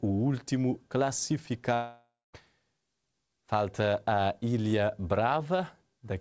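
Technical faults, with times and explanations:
1.74–2.35 s, long network dropout: the last sound is drawn out into a fading buzz or hiss, then about 0.23 s of near silence, and the audio resumes with 0.6 s gone, likely because packets stopped arriving. Unlike a brief loss, the concealment runs out and leaves an audible gap.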